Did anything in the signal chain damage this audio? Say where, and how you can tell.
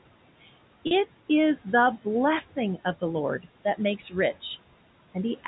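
Yes. Noise suppressor artifacts from the call processing stage run through the whole clip. The background noise drops by about 18 dB between words and comes back up under the speech. The suppressor decides frame by frame which bands are noise and turns them down.

The network stage shows packet loss with pitch repetition. At 0.87 to 0.91 s, just before "is the blessing of", a 40 ms gap becomes a short, buzzy held tone. A 10 ms repeat follows at 3.09 s, after "the blessing of the". The receiver replayed the last pitch period.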